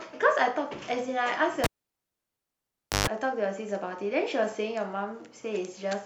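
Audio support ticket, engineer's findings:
Cable pulled and plugged in, 1.64 s to 3.07 s. Pop at 1.64 s, then about 1.38 s of near silence on the speech. Roughly 0.13 s burst of 50 Hz mains buzz as the plug tip makes contact alone before full seating. Second pop at 3.07 s on reconnection. Probable component: input cable or connector. The live signal path was broken and remade, and the ungrounded tip picked up hum.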